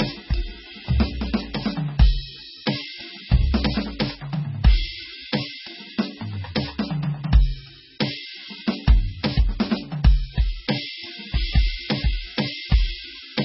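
Music, and from start to finish it sounds dull and watery: everything above about 5.6 kHz is simply missing, and the remaining sound swirls and warbles as fine detail flickers in and out. This is likely heavy MP3 compression at a very starved rate, which fits a bitrate around 16 kbps. With so few bits, the encoder chops off the treble at a fixed cut-off and discards quieter frequency components, which switch on and off from frame to frame.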